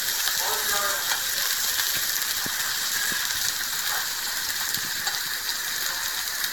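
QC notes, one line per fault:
Throughout: generation loss. The audio has the swirly, hollow character of lossy coding stacked on itself, with smeared transients and blurred attacks, and nothing above 19.3 kHz. The likely cause is roughly five successive MP3 encode/decode passes, which fits a rate around 96 kbit/s. Each pass requantises on a shifted frame grid, so the coding noise and spectral holes of every generation build up beyond what a single encode would leave.
2.38 s, 4.83 s: audio missing between chunks. At each point the sound skips forward abruptly, with roughly 50 ms gone and the two sides butted together with no silence between them. The two skips are spaced at a regular interval, which fits processing in 2.5 s blocks. The likely cause is a recorder or processor dropping a short slice each time it closes one block and opens the next, leaving a small discontinuity at each seam.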